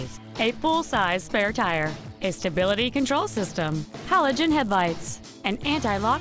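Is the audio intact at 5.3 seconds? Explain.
No. At 5.3 s, as throughout, the resampler restarted on every block: each 10 ms block was converted from 48 kHz to 16 kHz in isolation, leaving a small error at every edge. With blocks this short it sounds as a 100 Hz buzz riding on the signal.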